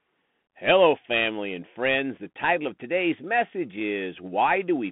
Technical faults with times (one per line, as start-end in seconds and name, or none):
0.00-4.92 Bluetooth CVSD headset codec